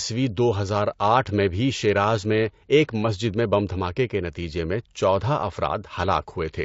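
Throughout, the speech sounds plainly rough and grainy, with noise between the harmonics. This is likely low-delay AAC compression (AAC-ELD), whose short frames, at a rate that fits about 32 kbps, smear pitch detail.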